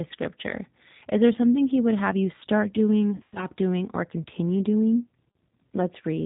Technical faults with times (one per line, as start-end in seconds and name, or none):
0.00-6.25 G.729 codec
3.16-3.46 VoIP packet loss concealed by the speech codec